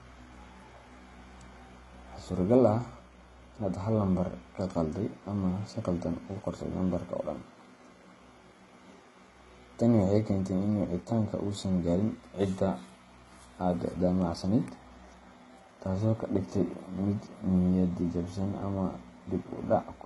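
Across the whole speech clip the voice carries the artefacts of two different codecs heard together, and nothing at all above about 11.3 kHz. This mix of two distinct artefact flavours is likely transcoding between lossy codecs: the sound points to a very low-rate HE-AAC encode near 16 kbit/s, re-encoded as MP3 around 48 kbit/s, with the second encoder wasting bits reproducing the first one's damage.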